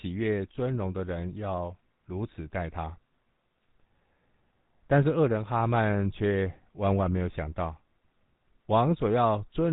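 From start to finish, the speech carries GSM full-rate codec damage, and it is plainly audible. The codec rebuilds the voice from a vocal-tract model driven by sparse, regular pulses. That gives a buzzy, gravelly roughness. Nothing above 4 kHz survives. The sound fits a 13 kbps stream.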